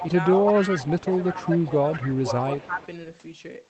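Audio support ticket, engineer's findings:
Echo leak, 0.00–2.86 s: faint delayed copy of the talker trailing by about 189 ms, roughly 15 dB under the direct sound. Likely the far end's echo canceller is letting loudspeaker pickup through. Spectrogram shows ghost harmonic traces shifted right of each syllable; the waveform shows small lagging bursts.

Speech suppressed in double talk, at 0.00–0.05 s, 0.95–1.92 s and 2.54–2.80 s: talker level dips by up to about 5 dB while both sides overlap. The echo canceller likely can't separate near talker from echo and attenuates both. Waveform shows an envelope sag; spectrogram shows a dimmed band, all above about 8 kHz empty, as expected from the call codec.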